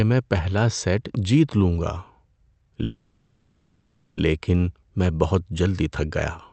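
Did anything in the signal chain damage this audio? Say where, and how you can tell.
Yes. A call audio freeze at the network and jitter-buffer stage: delayed packets likely drained the buffer from 2.83 to 4.20 s. The receiver stretched the last sound into a fading buzz or hiss for 1.34 s, then resumed where it stopped, adding delay without losing speech.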